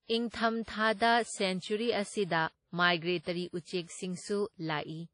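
A short speech recording carrying stacked lossy-codec damage from start to finish. There's nothing above about 10.1 kHz, and the artefacts of one codec are heard together with those of another. That's likely transcoding between lossy codecs: the sound fits an early low-rate WMA pass at around 32 kbit/s, then re-encoded to MP3 at roughly 48 kbit/s, with the second encoder wasting bits on the first one's artefacts and keeping its low cut-off.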